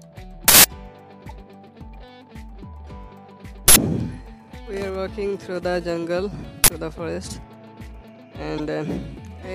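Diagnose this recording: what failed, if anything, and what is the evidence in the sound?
Uninitialised buffer at 0.48 to 0.64 s, 3.68 to 3.76 s and 6.64 to 6.68 s, in the driver or buffer stage: loud bursts of digital noise lasting 160, 80 and 40 ms, where blocks were played before audio was written, so stale memory came out as samples.

Corrupt frame decoded at 1.29 to 1.31 s and 8.58 to 8.60 s, in the codec: brief blips spanning what sounds like a couple of frames, peaking near about -30 dBFS and about -15 dBFS. Damaged bits were decoded anyway, misplacing energy across frequencies for each frame's length.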